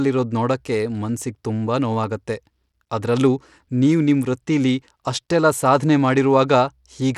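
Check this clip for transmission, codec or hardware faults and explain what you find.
One codec fault runs through the whole speech clip.

Bluetooth SBC compression, throughout: the sound is likely SBC-coded at a low bit pool, consistent with roughly 96 kbps. Starved upper sub-bands leave the treble flickering, with gritty quantisation noise and aliasing riding on the speech, and nothing above 20.8 kHz.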